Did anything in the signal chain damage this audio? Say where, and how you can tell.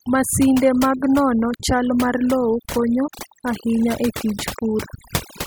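Yes. Overdone noise removal in the call processing stage affects the whole speech clip: the background drops and breaks up into twinkling specks. Bands near the noise estimate are being cut, taking quiet speech detail too, unlike codec artefacts, which smear the voice itself.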